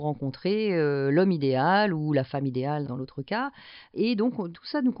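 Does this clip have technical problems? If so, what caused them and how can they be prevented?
No, there are no technical faults to be heard anywhere in this speech clip. With nothing that went wrong, there is no cause to trace and nothing that needs preventing.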